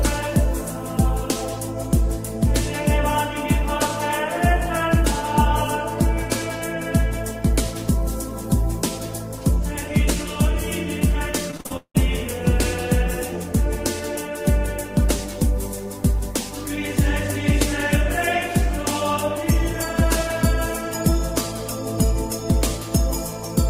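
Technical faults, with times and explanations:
11.51–11.99 s, repeated packet loss (robotic sound): seven gaps arrive in under half a second, the longest about 176 ms, with roughly 300 ms of audio missing in total. About 285 ms of that is patched by stretching the last received sound, so some 60% of the stretch is concealment. The result is choppy. Unlike a single dropout or a click, the holes keep coming across the burst.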